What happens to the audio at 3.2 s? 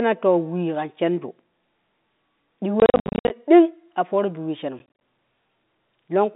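At 3.2 s the speech is inside a burst of packet loss filled with silence, running from about 2.8 to 3.3 s, just before "ding a fooro bi". About 330 ms of the 500 ms span drops out in short holes, the longest 60 ms, which fits 10 ms packets going missing. The gaps are silence with hard edges, not the smeared or repeated sound that loss concealment would leave.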